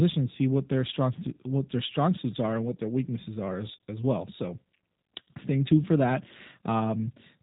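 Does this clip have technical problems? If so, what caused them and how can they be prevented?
Yes. Throughout, the speech sounds muffled, rough and synthetic, with nothing above 3.8 kHz. This is G.729 codec damage: an 8 kbit/s model rebuilds the voice from filter, pitch and sparse pulses. To prevent it, carry the call over a wideband or higher-bitrate codec instead of G.729.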